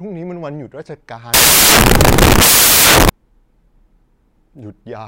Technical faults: samples built from the wrong bytes

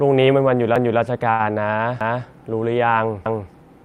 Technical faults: overlapping chunks; short stall from a late packet

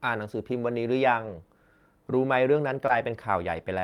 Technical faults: lost packet rebuilt from error correction; short concealed packet loss

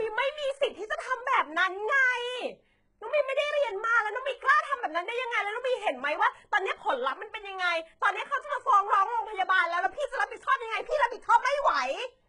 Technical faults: HE-AAC compression

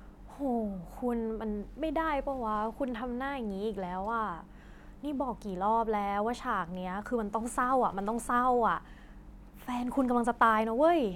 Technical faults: none

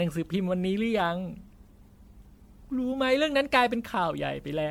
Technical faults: generation loss

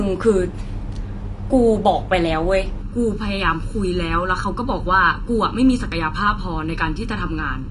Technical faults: AAC compression; channel delay (comb filtering)

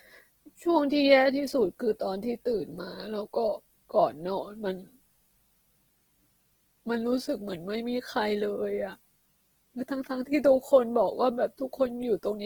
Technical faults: Opus compression

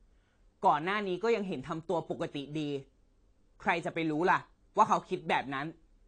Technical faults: AAC compression

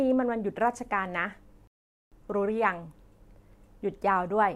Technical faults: rebuffering stall

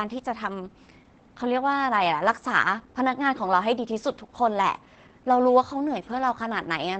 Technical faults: Opus voice compression

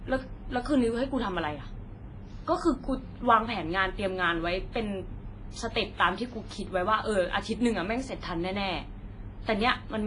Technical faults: WMA compression

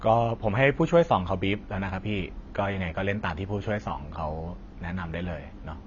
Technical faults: AAC compression

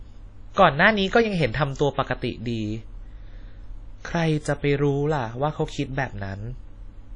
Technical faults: WMA compression

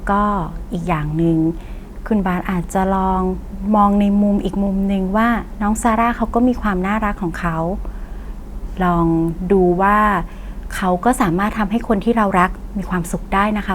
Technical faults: none

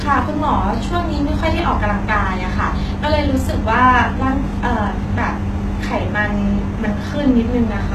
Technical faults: HE-AAC compression

